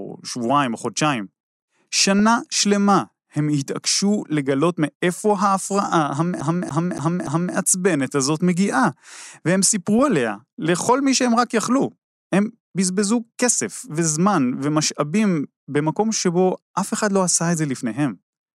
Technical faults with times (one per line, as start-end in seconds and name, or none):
2.19-2.27 DAB burbling
6.41-7.55 CD stuck on one turn
9.99 DAB burbling
12.96-13.03 DAB burbling